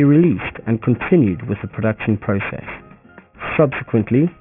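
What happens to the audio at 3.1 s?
At 3.1 s the sound is gritty and metallic, with tones at wrong, unrelated pitches crowded up against a hard band edge near 3 kHz. This is aliasing, present throughout the clip: the rate was lowered, pointing to about 6 kHz, without first filtering, so content above 3 kHz folded back downward, sitting roughly 15 dB under the signal.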